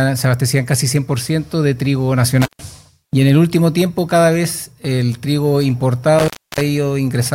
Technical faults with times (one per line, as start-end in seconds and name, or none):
2.42-2.61 intermittent contact
6.19-6.61 intermittent contact